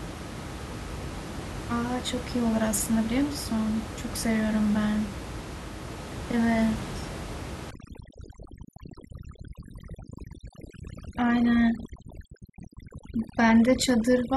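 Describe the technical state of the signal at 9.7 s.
At 9.7 s the signal is under overdone noise removal, running from 7.71 s to the end. Bands near the noise estimate are gated off, leaving the background broken into twinkling specks.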